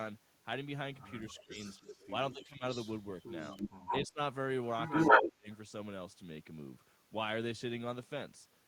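Speech suppressed in double talk, 1.1 to 2.64 s: the speech dips by as much as about 15 dB, in pieces adding up to roughly 0.7 s, likely because both ends talked at once and the echo canceller turned everything down.

Echo leak, 1.3 to 4.07 s: a copy of the speech returns 240 ms late, only slightly quieter than the original, likely because the far loudspeaker's echo was not fully cancelled and was sent back.

Speech suppressed in double talk, 3.52 to 4.2 s: a brief cut of about 20 dB, likely the canceller again muting overlapping talk.

Echo leak, 4.87 to 5.29 s: a short echo at 145 ms delay, clearly louder than the speech, likely leaked loudspeaker pickup.

Speech suppressed in double talk, 5.13 to 5.48 s: the deepest drop, about 30 dB, near-silencing the speech, likely the canceller clamping down during the overlap.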